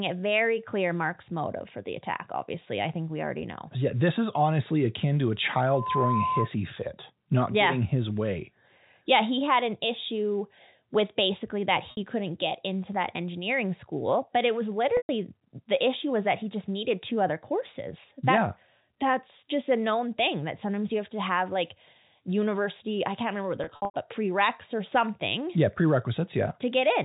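At 5.67 s, just after "honestly akin to a", a loudspeaker feedback squeal takes over. A microphone is hearing the loudspeaker it drives, and the loop gain tops one at 1 kHz. That single tone swells over roughly a third of a second to sit a few decibels above the speech. It breaks off at 6.51 s, before "fit not yeah getting".

Packet loss with pitch repetition follows, heard over the narrow telephone band of the G.711 line. At 11.91 s, after "issue with basically that", a 60 ms gap is bridged by repeating the last pitch period. It sounds like a briefly held, buzzy tone before "couldn't get into that". At 14.97 s a 120 ms loss holds, then fades. At 23.64 s, after "can't remember what they're", 180 ms of losses scatter across 300 ms, the longest run 90 ms. The gaps end before "but prereqs or something". The gap lengths fit 30 ms packets.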